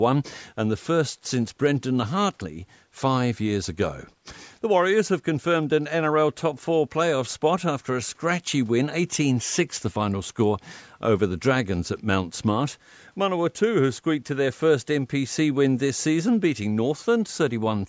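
No technical faults can be heard anywhere in this speech. It has the sound of a call's microphone processing, with the lowest bass trimmed away and nothing above 8 kHz.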